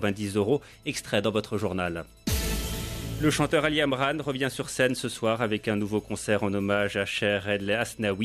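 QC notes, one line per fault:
No faults detected in this audio.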